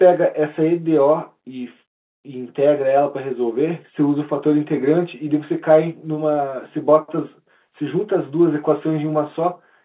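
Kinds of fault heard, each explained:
No faults are heard anywhere in this speech recording.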